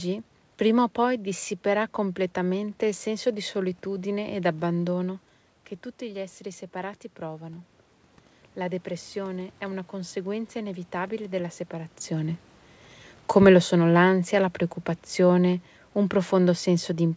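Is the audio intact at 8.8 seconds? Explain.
No. At 8.8 seconds the clip is in a stretch of automatic gain rising that runs from about 8.66 to 12.0 s. The speech level at the microphone dropped by about 10 dB, and the gain control slowly raised its gain by about 4 dB to compensate. Unlike a talker simply moving closer, which changes only the voice, this gain ramp lifts the voice and the room noise together, in a gradual swell lasting over three seconds.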